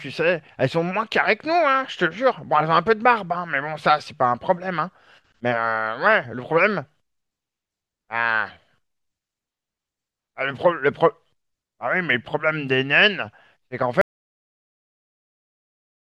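At 14.01 s the speech cuts off and the clip ends in an audio dropout to silence. The gap runs to the end, about 2.05 s of silence. No room tone or hiss remains underneath. The input signal was most likely lost, through a disconnected device, a failed link or a stray mute, while recording carried on. Whatever was said in that stretch is gone.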